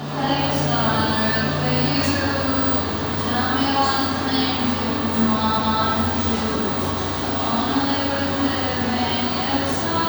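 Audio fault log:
2.51–2.71 s, repeated frames: a chunk of compressed audio about 93 ms long got played three times running, so you hear a quick stutter and the clip gains about 0.19 s.
5.53–5.76 s, repeated frames: here a longer 232 ms block of frames was fed to the decoder twice, so the sound jumps back and replays itself, stretching things by about 0.23 s.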